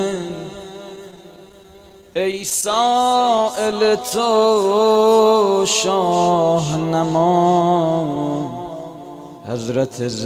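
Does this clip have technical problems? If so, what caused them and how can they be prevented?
Yes. From 0.89 to 4.13 s the audio has repeated stalls, a stutter: thirty brief hitches, none longer than about 12 ms, adding up to roughly 0.28 s of sound that is continued from the moment before. Packets arrived late or more slowly than playback, so the jitter buffer kept running dry and the receiver bridged each gap. Nothing is lost, which separates this from packet loss, where pieces go missing. A larger, adaptive jitter buffer and a steadier network path would prevent it.

A jitter buffer slow-down overlaps the stalls from 3.29 to 5.18 s. The receiver stretched the audio by about 184 ms, playing at 91% speed, by repeating single pitch periods and fragments of pauses to rebuild its reserve. Pitch stays the same, so the sound drags and draws out instead of dropping lower, as it would with a clock or sample-rate mismatch. 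Keeping network delay stable, so the buffer need not refill itself, would prevent it.

Jitter buffer speed-up appears twice. From 7.01 to 8.16 s the audio runs at 108% speed with about a tenth of a second removed, and from 9.38 s to the end it runs at 107% with around 70 ms cut. Each time the buffer held more than its target, likely after late packets arrived in a burst, so short pitch-period pieces were dropped. Pitch is unchanged, unlike a sped-up recording, and the sound just hurries. Smoother packet delivery, without bunching, would prevent it.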